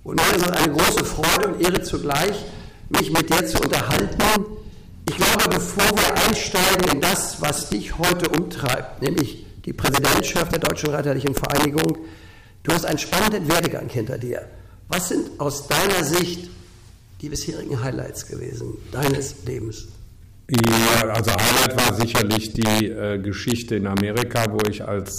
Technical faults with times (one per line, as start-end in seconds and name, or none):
0.00-25.19 integer overflow